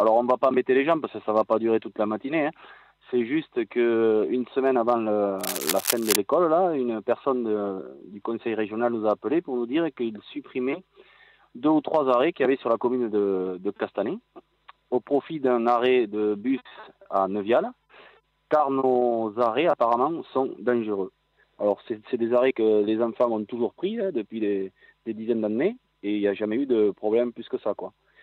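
From 5.39 to 6.16 s, a burst of cable scratch noise rides over the sound: roughly three quarters of a second of dense, ragged scratching and rustling, only a little quieter than the main signal. The likely cause is a worn cable, plug or control being moved, its contact resistance jumping about rapidly. On the waveform it shows as jagged, irregular spikes over the signal; on a spectrogram, as a patchy broadband smear with uneven vertical streaks.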